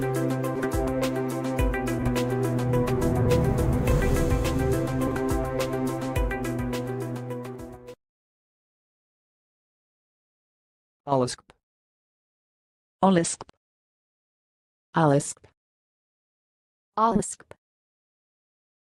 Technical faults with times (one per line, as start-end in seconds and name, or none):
0.56-0.66 frames out of order
1.98-2.08 frames out of order
3.21-3.26 frames out of order
5.07-5.16 frames out of order
11.07 frames out of order
13.49-13.54 frames out of order
15.21-15.30 frames out of order
17.11-17.21 frames out of order